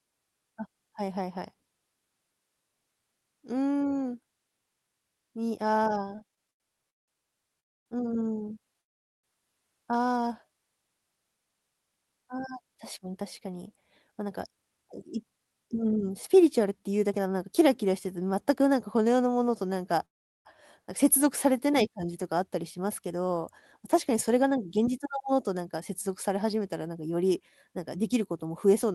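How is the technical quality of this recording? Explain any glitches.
The speech has several network-timing faults: stutters, three freezes, and stretches that play too slow or too fast. Through the Opus call path, the audio carries ordinary coding noise with the top end limited to about 12 kHz.

Repeated stalls (stutter), 6.05 to 8.76 s: packets kept arriving late, so the buffer ran dry eleven times. The receiver filled about 390 ms by extending sound, with the longest gap 178 ms, and the speech drags and stutters.

Call audio freeze, at 7.60 to 7.88 s, 8.81 to 9.25 s and 20.05 to 20.47 s: the sound drops to silence for about 260 ms, 420 ms and 380 ms, then continues where it stopped. This was likely the jitter buffer running empty while packets were held up.

Jitter buffer slow-down, 8.60 to 10.55 s and 21.23 to 22.39 s: the receiver repeated pitch periods to rebuild its reserve, adding 91 ms each time. 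Speech plays at 96% and then 93% speed, drawn out at unchanged pitch.

Jitter buffer speed-up, 12.12 to 17.45 s and 24.10 to 28.92 s: the buffer held excess audio, so the receiver trimmed short pieces, roughly half a second and then about 0.3 s. Speech runs at 110% and 107% speed, sounding hurried at the same pitch.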